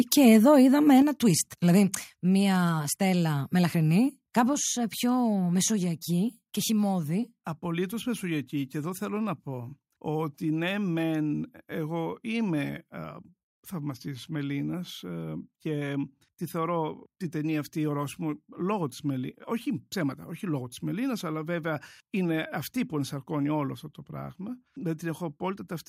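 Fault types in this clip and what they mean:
microphone overload: From 0.12 to 0.28 s the loudest peaks of the speech are flattened, which gives them a harsh, crackly edge. The likely cause is an input level driving the converter about 4 dB past its ceiling, so only a small fraction of samples are sheared off. On the waveform the tops look squared off. On a spectrogram that stretch shows a brief smear of broadband energy reaching well into the kHz range.
microphone volume stepped down: The whole signal, speech and background together, drops abruptly in level four times, at 1.02, 2.04, 4.53 and 5.76 s. The first step is about 5 dB and the others about 2 dB each, which points to the call software likely trimming the device input gain after the overload. On a waveform the envelope shrinks in a clean stair-step. A spectrogram shows every band darkening at once, with a sharp vertical boundary at each step.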